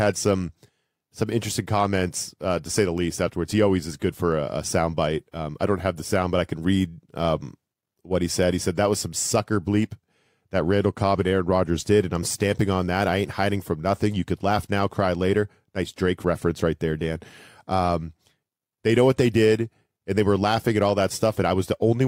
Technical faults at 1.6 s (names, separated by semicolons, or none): none